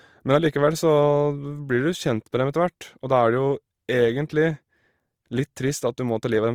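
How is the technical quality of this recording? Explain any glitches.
The quality is compromised by audible compression damage that runs through the whole recording. From start to finish the speech sounds rough and grainy, with a noisy texture where the tone should be clean, though the bandwidth stays full, reaching about 20.1 kHz. This is likely Opus compression in its music (CELT) mode, at a bitrate that fits roughly 24 kbps. When bits run short, the encoder fills bands by copying lower ones or adding noise, which creates the grain.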